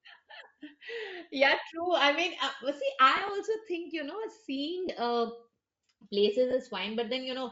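The whole clip carries Bluetooth LC3 compression at a likely low bitrate, consistent with about 32 kbps in 10 ms frames. The codec discards much of the upper spectrum and substitutes noise, so the speech has a plainly audible breathy, grainy edge throughout. Lost LE Audio frames then appear three times. From 3.17 to 3.29 s, after "mean uh well see" and before "think you", the decoder patches about 50 ms of gaps spread over 120 ms, in short runs of around 20 ms, with recycled spectra given random signs. Two 20 ms losses of two frames each follow, at 4.87–4.89 s and 6.51–6.53 s.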